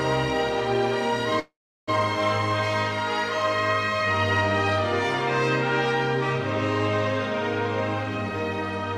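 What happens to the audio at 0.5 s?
Nothing goes wrong at 0.5 s; the audio is intact there.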